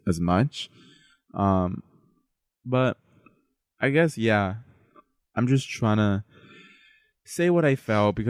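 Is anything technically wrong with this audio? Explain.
No, nothing is technically wrong with this audio.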